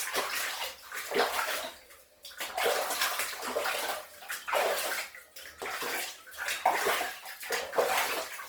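From start to finish the sound comes across grainy and rough, with tonal parts dissolving into a fizzy, noisy texture, though the high end stays present rather than dulled. This is likely Opus compression running in its music (CELT) mode at a low bitrate, which fits roughly 24 kbps: short of bits, the encoder preserves each band's energy but patches detail with folded or noise-like content, so the damage is plainly audible as grit rather than swirling holes.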